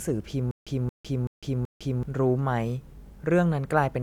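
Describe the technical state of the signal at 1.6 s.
At 1.6 s the speech is caught in a stutter with silent gaps. Between 0.51 and 2.03 s the same fragment of about 226 ms plays again and again, four times in all, each time followed by about 154 ms of dead digital silence, so the burst returns on an even beat every 380 ms. The likely cause is a stalled player or stream that replays its last buffered fragment at each retry and then runs empty, so the audio meant for that stretch is lost.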